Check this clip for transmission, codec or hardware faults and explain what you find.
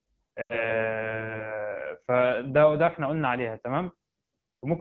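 Two faults are audible: low-rate AMR wideband (HD Voice) coding across the whole clip, and a burst of lost AMR speech frames early on.

Throughout, the speech has the rough, raspy texture of AMR-WB at one of its lowest rates, which fits the 8.85 kbit/s mode. Too few bits reach the pulse excitation that drives the vocal tract model below 6.4 kHz, so voiced sounds turn grainy, and the band from 6.4 to 7 kHz is only shaped noise. On a spectrogram, energy stops sharply near 7 kHz, with smeared harmonics and a diffuse, unstructured top band.

From 0.42 to 0.78 s, lost AMR speech frames interrupt the speech. The gap points to roughly four missing frames, about 80 ms of audio. The decoder reuses the last good pitch and vocal tract settings at falling gain, so the sound drops to near silence within two frames, and the speech returns weak or rough. The waveform shows a quickly shrinking envelope, and the spectrogram shows frozen, repeating harmonics dimming into a faint gap.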